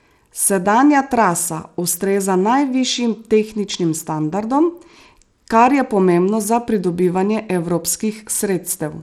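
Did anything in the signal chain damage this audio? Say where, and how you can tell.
Yes. The codec stage, likely Bluetooth SBC compression, damages the speech throughout. With too few bits, the upper sub-bands starve, so the treble flickers in and out while a gritty, aliased haze rides on the sound. The damage is plainly audible and fits a bitrate around 96 kbps.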